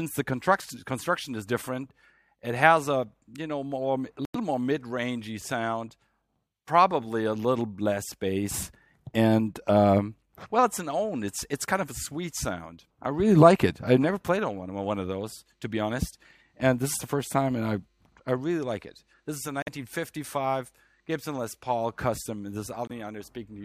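Corrupt frames muted at 4.25–4.36 s, 19.62–19.68 s and 22.87–22.91 s: the decoder rejected damaged frames, leaving abrupt silent gaps with timing intact.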